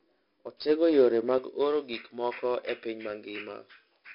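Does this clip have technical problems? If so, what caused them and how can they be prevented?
Yes. Throughout the clip the speech carries 4-bit ADPCM compression. Each sample is coded as a small step from a predicted value, so the error is a gritty hiss that rises and falls with the speech and turns to roughness on sharp onsets. The damage is heavy, which fits a rate near 44 kbps, and nothing survives above 5.3 kHz. Unlike steady background hiss, this noise vanishes in pauses. Encoding with a higher-resolution or modern codec prevents it.

From 1.38 s to the end, pre-emphasis was left on. The treble boost applied before transmission, here following a J.17 curve, was never undone by the matching de-emphasis. The curve gives about 11 dB more gain at 10 kHz than at 1 kHz, so the speech turns thin, bright and hissy on sibilants. A wrong equaliser setting would affect the whole clip, but this tilt begins partway through, and the high-frequency cut-off from the codec limits how far up it reaches. 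Applying the matching de-emphasis at playback prevents it.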